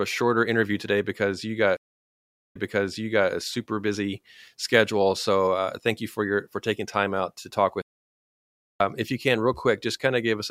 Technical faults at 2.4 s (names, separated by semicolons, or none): stream reconnect